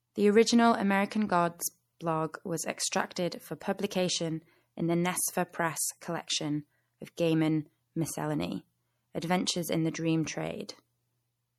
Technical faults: MP3 compression

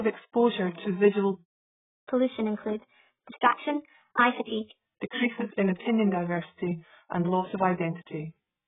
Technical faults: AAC compression; catch-up at higher speed

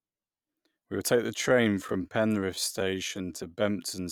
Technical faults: time-stretched section

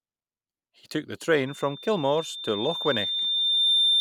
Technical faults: loudspeaker feedback squeal

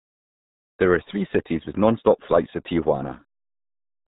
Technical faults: RealAudio 14.4 codec

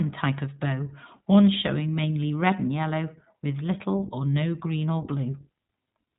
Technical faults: iLBC codec

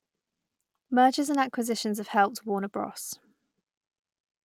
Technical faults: none

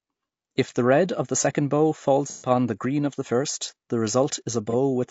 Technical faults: low-delay AAC compression; AAC frame loss with concealment

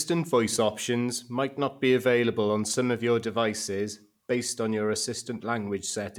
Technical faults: none

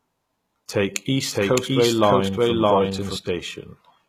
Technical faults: HE-AAC compression; doubled audio track

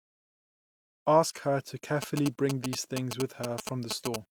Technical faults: low bit depth without dither; GSM signalling bursts

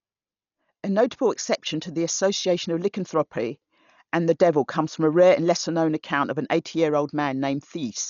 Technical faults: Dolby Digital compression

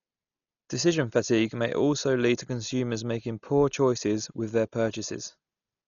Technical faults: Dolby Digital compression

